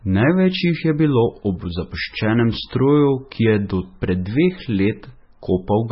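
From start to finish, the speech carries heavy damage that sounds like MP3 compression. Nothing is heard above 5.6 kHz. The treble simply stops there. The sound is watery and swirly. Sibilants turn metallic and chirpy. Consonant attacks smear. The likely cause is an encoder starved of bits, pointing to a very low bitrate of around 18 kbps. It cuts the top band and drops weak frequency lines, which flicker on and off between frames.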